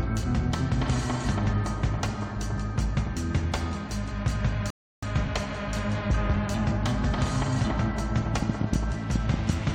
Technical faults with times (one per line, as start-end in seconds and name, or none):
4.70-5.03 rebuffering stall
8.34-9.51 train of clicks